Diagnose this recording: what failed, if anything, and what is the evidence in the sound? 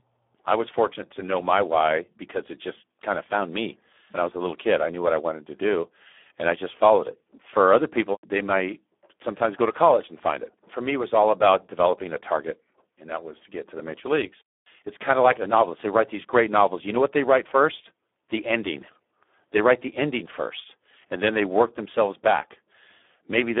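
The codec stage failed: the whole recording carries heavy Speex codec damage. Throughout, the speech is hoarse, buzzy and edging toward robotic, confined to roughly 250 Hz to 3.5 kHz with nothing above 3.8 kHz. That grainy rasp points to a low-quality CELP mode, around 8 kbps, starving the excitation of bits. A plain narrowband line would keep clean voicing, and transform codecs swirl or smear instead of turning voices buzzy and synthetic.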